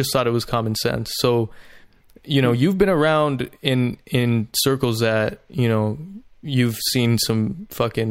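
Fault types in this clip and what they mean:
No faults can be heard.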